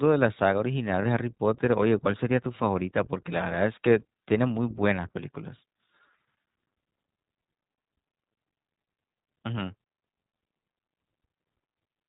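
The whole recording passes through the iLBC codec, so nothing above 4 kHz survives. Each short frame's excitation is coded on its own, leaving the speech clear but plainly rough and synthetic, a character consistent with the 15.2 kbps, 20 ms frame mode.

From 1.02 to 1.05 s come lost iLBC frames: a gap of about 20 ms, which fits a single missing frame. The decoder fills it by repeating the last pitch cycle blended with noise, heard as a brief buzzy held vowel, and the voice recovers immediately afterwards.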